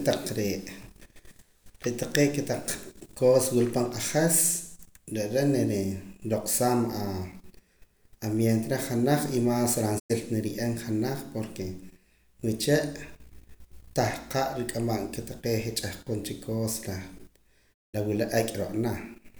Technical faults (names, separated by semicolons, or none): digital broadcast dropout